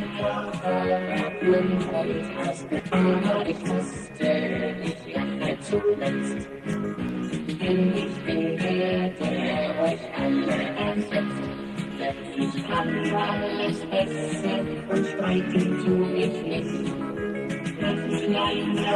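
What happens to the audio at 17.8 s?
Nothing goes wrong at 17.8 s: the audio passes through intact, carrying only the ordinary sound of the call path it travelled, with its top end limited to around 12 kHz.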